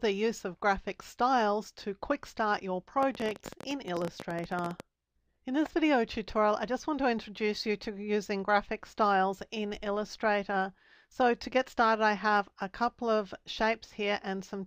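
From 3.03 to 4.81 s a train of clicks ticks over the sound, around thirty sharp pops at an uneven 16.4 per second, peaking about 10 dB above the signal, likely interference or a faulty connection. The waveform shows narrow spikes, the spectrogram thin vertical broadband lines.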